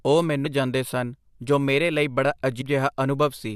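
At 0.45 s, just before "ਜਾਂਦੇ ਸਨ ਜੋ ਮੇਰੇ", and again at 2.60 s, damaged data in a compressed stream gives brief glitches: corrupt frames throw the decoder off sync until it finds the next header.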